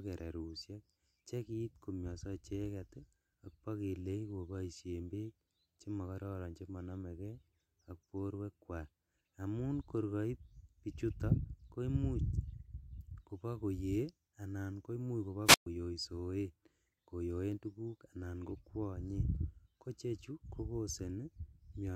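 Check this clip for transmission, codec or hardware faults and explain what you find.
A wireless microphone squelch dropout occurs at 15.45 to 15.66 s, just after "koimuch kobo". As the FM signal fades, hiss rises and the receiver's squelch mutes the speech for about 124 ms.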